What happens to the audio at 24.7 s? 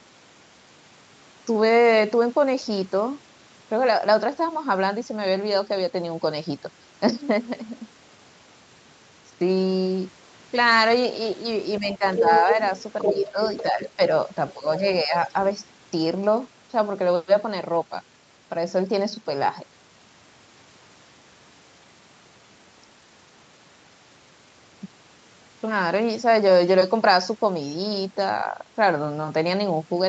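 Nothing goes wrong at 24.7 s: the speech continues intact through that moment, with no dropout, glitch or distortion.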